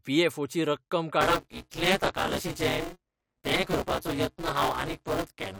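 From 1.21 s to the end, the speech carries buffer tearing: writer and reader of the ring buffer have slipped, so roughly half of each period replays audio about 20 ms stale. The hard joins produce a steady robotic buzz near 188 Hz, which fits a 256-sample buffer.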